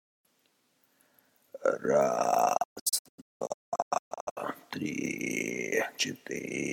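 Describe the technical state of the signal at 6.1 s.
No fault is audible at 6.1 s, and the signal is intact at that moment.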